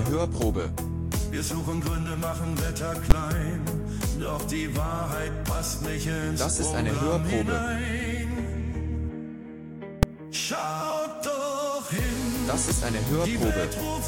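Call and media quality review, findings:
Two sharp bangs, at 3.11 s and 10.03 s. Invalid numbers at full scale: a processing stage produced infinite or invalid values, clamped to maximum positive or negative output. First burst lasts about 11.6 ms, fitting a 512-sample block; second about 2.9 ms, fitting a 128-sample block. Both too short to hear start and end separately, so each lands as a single pop. Probable component: DSP stage upstream of the output clamp.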